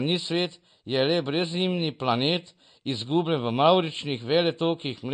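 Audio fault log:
Throughout, MP3 compression: the speech has nothing above 9.1 kHz, and the codec damage is plainly audible. The likely cause is an MP3 encode starved of bits, which fits a bitrate near 48 kbps. Short of bits, the encoder discards all treble above a fixed cut-off and zeroes weak frequency lines that then flicker on and off between frames, leaving the top end dull and the remaining detail unstable.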